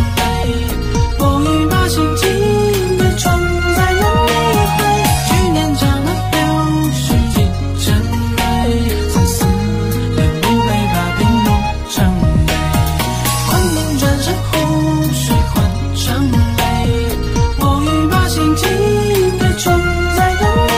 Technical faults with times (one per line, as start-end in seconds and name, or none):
5.07-11.07 adaptive stream at a lower bitrate